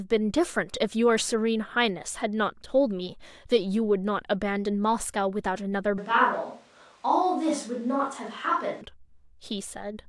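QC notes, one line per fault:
5.98 to 8.81 s, switch to a distant microphone: the close microphone's feed likely dropped out and a farther pickup took over, so the speech turns suddenly roomy and hollow, thinner in the bass and about 5 dB quieter, with background noise around 35 dB below the voice, before snapping back.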